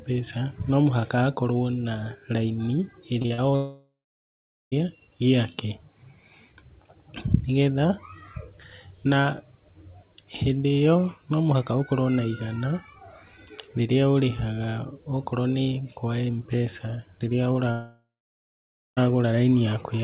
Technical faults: repeated packet loss (robotic sound); long network dropout

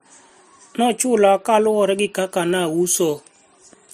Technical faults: transcoding between lossy codecs

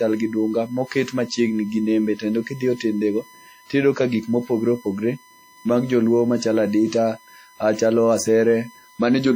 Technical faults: USB whine; WMA compression

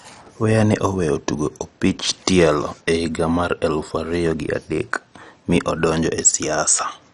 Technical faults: MP2 compression

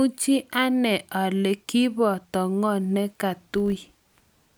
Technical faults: filter restarted on every block

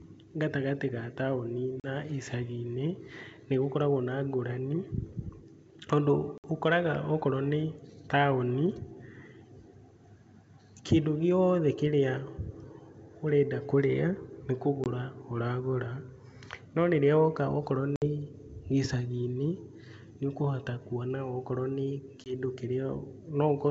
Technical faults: packet loss on an ADPCM call

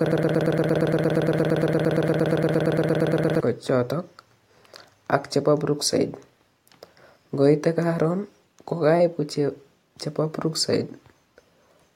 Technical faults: broken-record loop

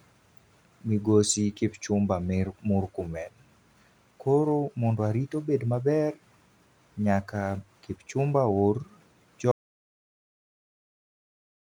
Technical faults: audio dropout to silence

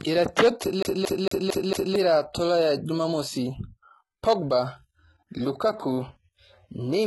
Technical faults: HE-AAC compression; CD stuck on one turn

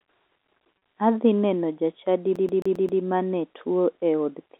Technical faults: packet loss with pitch repetition; CD stuck on one turn

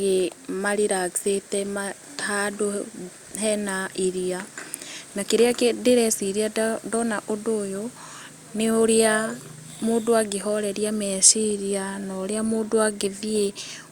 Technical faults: none

